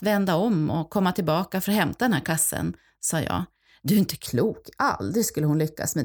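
From 4.26 s to the end of the clip, just after "är inte", the speech picks up channel delay with comb filtering. One channel arrives a fraction of a millisecond behind the other. When the two are summed to mono, the shared content cancels at evenly spaced frequencies. The first notch sits around 3 kHz, with further notches above it. The speech turns hollow and phasey. Upper presence thins out in a fixed, unchanging pattern.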